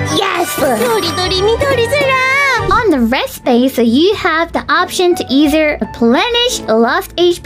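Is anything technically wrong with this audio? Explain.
No, nothing technically wrong can be heard in this audio. No faults turn up at any point in the clip.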